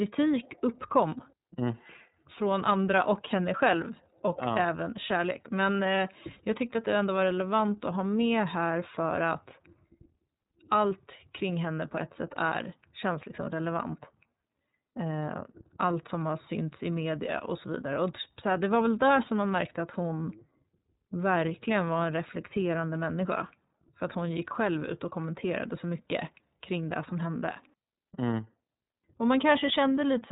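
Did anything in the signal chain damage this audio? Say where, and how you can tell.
Yes: the iLBC codec stage coded each 30 ms frame independently, likely near 13 kbps, leaving nothing above 3.8 kHz and a plainly rough, synthetic speech throughout.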